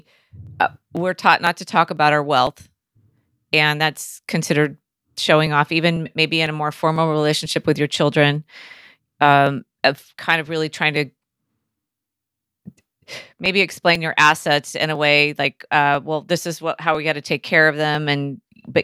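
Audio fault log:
0.47–18.45 s, periodic USB or driver dropouts: a regular tick recurs every 0.5 s across the speech, about forty in all, each a loss of roughly a millisecond of audio. Nothing fills the gaps; the samples are simply skipped, so the waveform jumps and produces a brief click. The even spacing points to a background task stalling the USB bus or audio driver on a fixed schedule. The ticks are audible only where signal is present.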